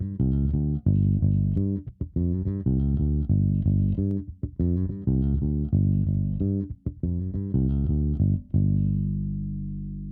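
Three sharp, isolated clicks occur at 1.57 s, 4.11 s and 6.15 s, each a single broadband tick across the spectrum. The likely cause is dropped samples: a fraction of a millisecond goes missing, so the waveform jumps abruptly between values without removing audible sound.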